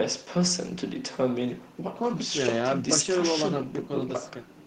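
Listening to this speech recording, nothing technical stood out at any point.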